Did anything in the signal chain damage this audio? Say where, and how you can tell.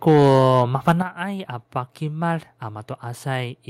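Yes. From 0.07 to 0.39 s, and again from 0.87 to 0.92 s, the loudest speech peaks turn harsh and crackly. This is likely microphone overload at the converter stage. The input drives peaks about 3 dB and about 4 dB past full scale, and their tops are shaved flat. In the waveform, the first stretch shows roughly a tenth of samples flattened at a common level, and the second a smaller share. A spectrogram shows vertical streaks of broadband splatter at those moments.

At 1.02 s, just after the second distorted peak, the voice and the background fall together by about 8 dB in a single instant. This is likely the microphone volume stepped down by call processing: the software reacted to the clipping by cutting the device's input gain in one step, with no fade. On a waveform, the envelope drops abruptly to a lower, steady height. On a spectrogram, every band, including the noise floor, darkens at the same moment.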